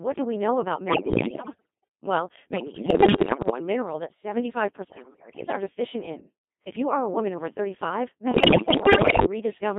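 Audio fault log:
Throughout: Codec 2 vocoder. The speech is robotic and buzzy, with a band of about 150 Hz to 3.6 kHz, and the codec damage is heavy. The character fits the 2.4 kbit/s mode. The decoder does not keep the waveform. It keeps only pitch, voicing, energy and a coarse spectral envelope for each frame, then rebuilds the voice from summed sine waves. That is why the speech sounds synthetic.
0.88–1.84 s, 2.54–3.60 s, 4.88–5.56 s, 8.32–9.26 s: bit errors on digital voice radio. The first burst follows "do we know about", and the third ends just before "deficient in". In each span the synthetic voice lurches in pitch, loudness and tone colour and breaks into warbles, bleeps and robotic gibberish. Bit errors run at roughly 15, 10, 7 and 20 percent. At that rate corrupted bits scramble whole-frame parameters, so the decoder synthesises the wrong sound.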